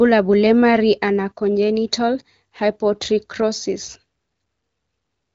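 Speech through an AMR wideband (HD Voice) path, with the capped top end and light coding texture of a rate near 15.85 kbit/s, and no technical fault to report.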